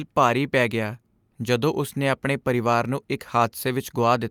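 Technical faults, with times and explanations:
No technical faults are present in this speech recording.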